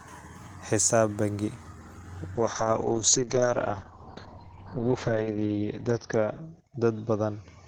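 Speech, with a call bitrate drop from 2.37 s to the end: the encoder falls from 40 to 7 kbps, bandwidth narrows from 20 kHz to 6 kHz, leaving coarse, muffled audio.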